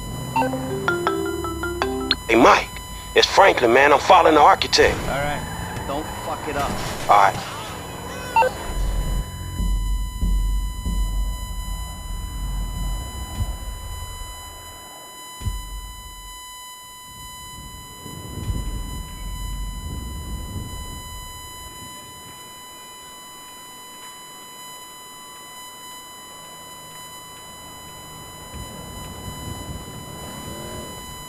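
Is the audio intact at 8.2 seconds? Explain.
No. At 8.2 seconds, as throughout the clip, USB whine is present: current drawn by the USB bus in 1 ms frames leaks into the audio through power or ground, adding a steady, fixed-pitch 1 kHz whine roughly 15 dB below the signal.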